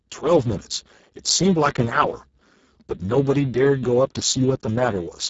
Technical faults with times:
0.00-5.30 Speex codec

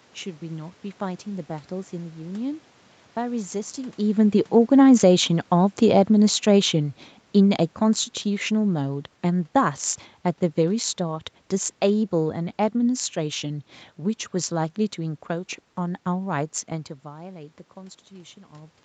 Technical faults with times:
4.84-9.90 automatic gain falling

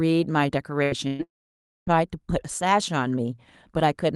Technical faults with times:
0.83-1.22 burst of packet loss
1.23-1.90 long network dropout

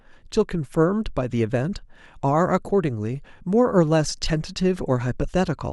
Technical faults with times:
none

